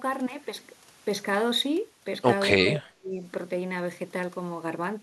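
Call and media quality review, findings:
Speech suppressed in double talk, 2.5 to 3.2 s. Speech level caves in for 0.7 s, deepest dip around 35 dB. Waveform envelope collapses to a near-flat trough, and the spectrogram thins to faint traces. Likely echo canceller attenuating near-end speech while the far end talked over it.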